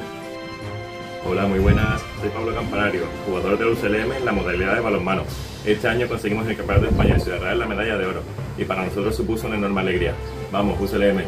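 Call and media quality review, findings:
Computer activity noise, whole clip. Faint buzzy, chirpy layer, pulsing at around 500 Hz, sitting roughly 35 dB under the programme. Tracks the machine's load, not the audio. Probable component: the analog input stage sharing ground with the host. CPU, GPU or mouse load changes shift that shared ground, and the ripple rides into the signal. Try a ground-isolated interface or moving the path off that supply.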